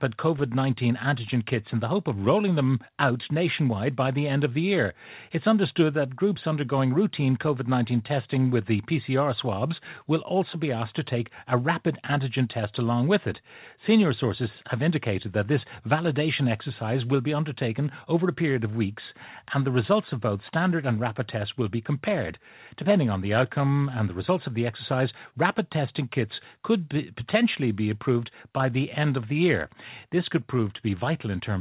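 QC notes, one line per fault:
No faults found; the speech has the expected narrowband call-path character, with nothing above 4 kHz, consistent with a G.711-type telephone codec.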